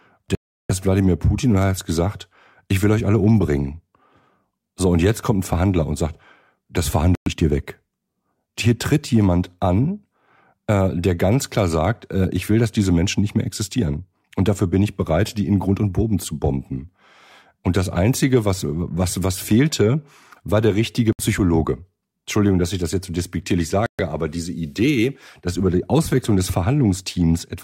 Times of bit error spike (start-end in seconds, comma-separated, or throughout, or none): none